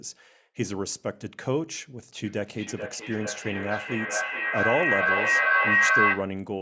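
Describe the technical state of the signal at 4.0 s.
At 4.0 s there is feedback echo between two devices, running from 2.26 to 6.4 s. A second device replays the sound into the microphone, which sends it round again about every 0.4 s. The repeats pile up, reaching about 7 dB above the speech.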